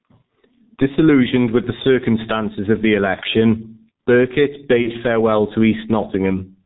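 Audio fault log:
Throughout: gain pumping. The level keeps being pulled down whenever the talker gets loud, with a swing of around 10 dB. Loud and quiet stretches sit unnaturally close in level, so the speech feels squashed. The likely cause is input gain set far too hot for the mic, with a fast limiter or compressor clamping down on every loud syllable and letting go in the gaps.
Throughout: G.723.1 codec. The speech is muffled and hoarse, with consonants smeared together and nothing audible above 4 kHz, so the top end is just gone. That's the signature of this old VoIP codec, and the heavy damage fits a bitrate of around 6 kbit/s. Its 30 ms frames and sluggish voice-model updates can't track fast changes, which is why transitions sound blurred and the voice has a rough, gritty edge.
4.82 to 4.90 s: VoIP packet loss concealed by the speech codec. Just before "farewell to" the sound is briefly stretched out and fades, and the voice stays impaired for a moment afterwards. 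The dropout length points to a single lost 30 ms frame. The decoder covered it by extrapolating its last pitch and filter while turning the gain down. Since each frame builds on the one before, the damage lingers past the gap itself.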